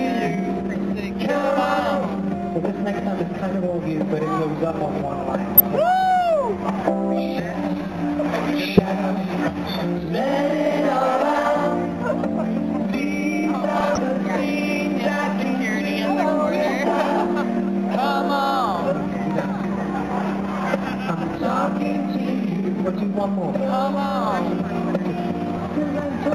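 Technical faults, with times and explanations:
5.57–5.67 s, 8.60–8.79 s, 13.80–13.98 s and 25.57–25.60 s: DAB burbling. Bit errors at a rate of a few tenths of a percent get past error correction into the MP2 audio, so corrupted sub-band samples produce brief blips in single frequency bands.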